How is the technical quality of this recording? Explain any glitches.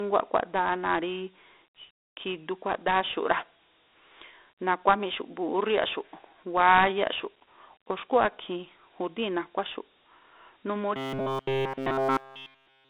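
The recording quality is poor: the speech runs through a low-grade telephony codec from start to finish, and two further faults break in.

The Dialogic VOX ADPCM coding throughout squeezes each sample into a coarse 4-bit step, at a rate that points to 32 kbit/s at 8,000 samples a second. The band sits at 300 Hz to 3.7 kHz, with nothing above 3.7 kHz, so the speech sounds thin and boxy, with plainly audible gritty hiss trailing it.

Between 2.74 and 2.83 s there is a loud pop, heard as two sharp pops in quick succession, roughly 5 dB above the speech, which continues underneath. A voltage spike from a plug, switch, static discharge or driver glitch is the likely cause.

From 10.97 s to the end of the clip, the playback keeps looping one tiny buffer of about 7.5 ms instead of taking in fresh audio, likely because new audio arrives too rarely. This robotic sound from repeated short buffers locks the speech into a rigid metallic buzz at 134 Hz.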